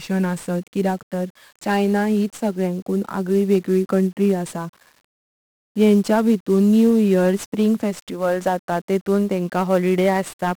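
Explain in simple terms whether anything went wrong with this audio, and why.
The speech was squeezed with 1-bit DFPWM compression for its whole length, from start to finish. This method keeps only a single yes-or-no step per sample, nudging the level up or down, so it can only roughly follow the real waveform. The damage here is heavy. The leftover error becomes a constant fuzz and crackle over the speech, and the crisp high sounds, like the hiss of s and the snap of t, disappear into a bed of noise.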